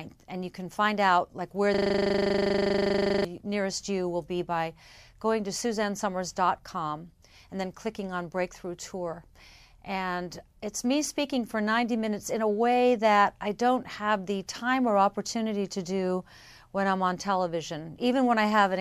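At 1.74 s the sound locks up into a system hang loop that runs until about 3.25 s. The machine or its driver stalled, but the audio hardware kept replaying the same 40 ms slice of its ring buffer over and over, roughly 38 times in a row. Repeating that fast, at 25 Hz, it comes across as a steady, rough buzz at the loop rate rather than a stutter, and then normal audio picks up again.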